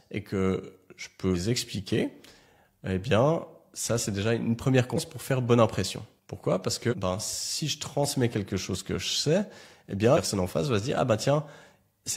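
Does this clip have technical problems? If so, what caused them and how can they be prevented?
Yes: compressed frames skipped at 1.30–1.36 s, 4.93–4.98 s and 6.88–6.94 s. The speech jumps ahead roughly 0.2, 0.3 and 0.3 s, which fits several whole 46.4 ms frames dropped. Each join is an abrupt break in the speech. Prevent it by ensuring complete file transfer and error-checked storage so the decoder receives intact frames.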